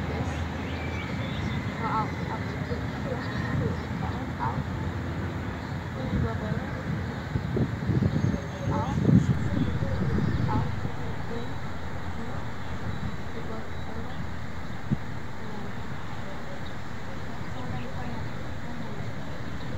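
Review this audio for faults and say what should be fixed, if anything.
A DC step occurs at 9.35 s. The waveform's zero line jumps by about -32 dBFS and holds there to the end, producing one low thump while the sound continues unchanged. The waveform trace shifts off centre, and a spectrogram shows a brief vertical smear plus steady 0 Hz energy afterwards.

To prevent it, keep a DC-blocking high-pass filter in the chain and avoid switching inputs or recalibrating the converter during recording.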